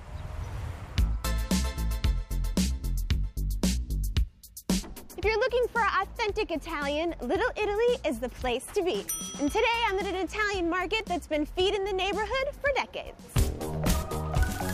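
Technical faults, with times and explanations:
No technical faults can be heard in this clip, so there are no times or explanations to give.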